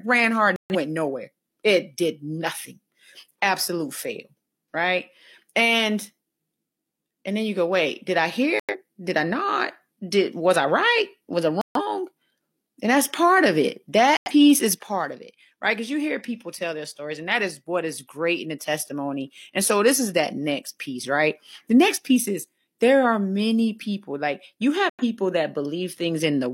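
Corrupt frames muted at 0.56, 8.6, 11.61, 14.17 and 24.9 s: damaged compressed frames were rejected by the decoder and replaced with silence, cutting the speech abruptly for 0.14 to 0.2 s each time, gaps that suggest two to four lost frames, with timing preserved.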